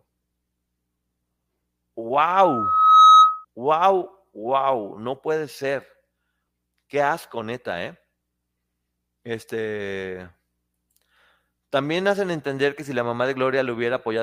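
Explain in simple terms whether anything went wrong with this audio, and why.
Yes, something went wrong: from 2.29 to 3.45 s there's loudspeaker feedback squeal. The microphone caught its own loudspeaker and looped it, so a single piercing tone around 1.3 kHz swells up over roughly 0.7 seconds and ends up shrieking well above the speech.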